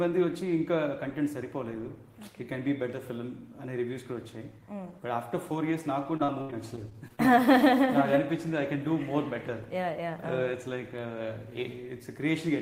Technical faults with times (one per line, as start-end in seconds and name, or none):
6.03-7.20 repeated packet loss (robotic sound)